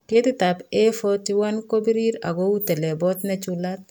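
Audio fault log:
No fault is logged for this speech clip.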